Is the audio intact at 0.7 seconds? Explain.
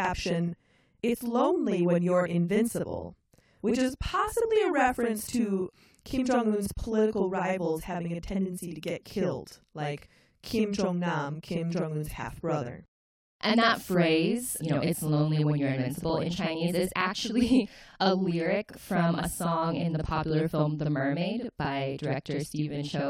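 No, not really. At 0.7 seconds, and for the whole clip, there's a channel delay doubling. One channel arrives about 46 ms late, which fits a 2048-sample buffer, and when the two get folded down to mono the late copy doesn't blend in. Instead you hear every syllable twice at equal level, a quick slap-back right behind the original, so the speech sounds doubled rather than clean.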